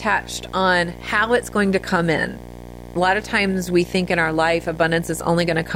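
Video or display buzz runs throughout the speech, a screen's 60 Hz field-rate pulses leaking in; its gritty edge and hash, unlike smooth mains hum, sit roughly 15 dB down.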